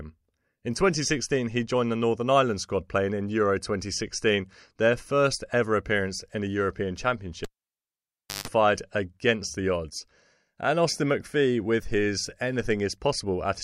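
At 7.44 s the cable is pulled and plugged in: a pop, about 0.98 s of near silence, a 0.16 s burst of 50 Hz mains buzz, then a pop before "against the odds and".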